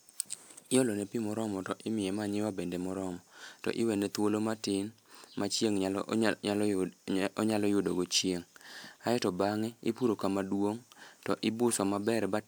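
Listening to this speech recording, nothing stood out as a technical problem at any point.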